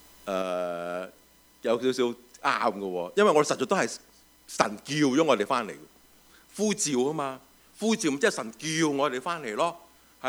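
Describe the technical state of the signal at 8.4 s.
At 8.4 s the signal is still in the lowered state left by a sudden gain jump at 0.42 s, which persists to the end of the clip. At that instant the level fell by about 5 dB in a single step, with the sound and its background noise dropping together rather than fading. The likely cause is a digital gain change applied without a ramp, so the whole remainder, including this point, sits at the reduced level.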